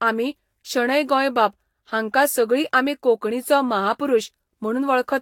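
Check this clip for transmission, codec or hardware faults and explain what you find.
One codec fault runs through the whole of this speech clip; nothing points to transmission dropouts or hardware trouble.

Throughout, the speech sounds swirly, smeared and hollow, with softened consonant attacks, likely from generation loss: repeated Vorbis decoding and re-encoding, about four passes at rates that fit roughly 70 kbit/s. Each pass requantises on a shifted frame grid, so noise and gaps compound. On a spectrogram, patchy holes and blurred onsets appear, with nothing above 19.1 kHz; the waveform's transients look rounded.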